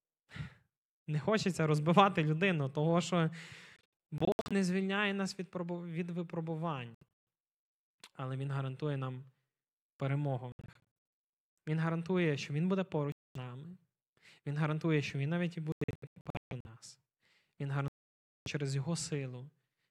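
The speech keeps cutting out in short bursts, which is likely a Bluetooth dropout: packets arriving too late get discarded, leaving abrupt silent holes. It happens at 3.76 to 4.53 s (after "розбивати людину того що", before "звільняє нас"), 6.95 to 7.25 s, 10.52 to 10.83 s (after "перемогу в"), 13.12 to 13.37 s, 15.72 to 16.67 s and 17.88 to 18.48 s, with the speech picking up as though it kept running underneath.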